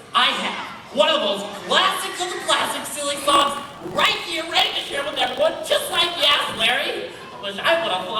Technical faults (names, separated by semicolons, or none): block size mismatch (truncated)